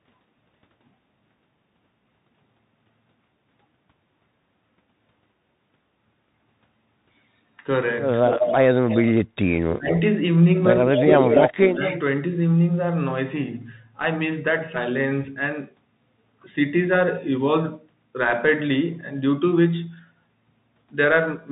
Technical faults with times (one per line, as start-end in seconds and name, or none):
0.00-21.51 Bluetooth CVSD headset codec
8.27-8.57 echo leak
8.87-9.12 echo leak
9.71-9.93 speech suppressed in double talk
9.90-10.01 echo leak
10.85-12.00 echo leak
10.88-11.86 speech suppressed in double talk